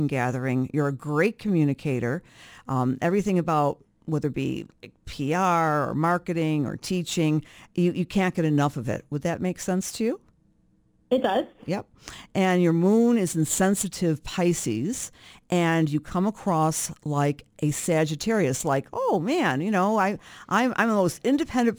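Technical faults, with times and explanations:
Throughout: crude rate conversion, nearest-sample picking between 48 kHz and 44.1 kHz leaves an inharmonic fizz riding loud, bright speech, unlike steady hiss, about 25 dB down.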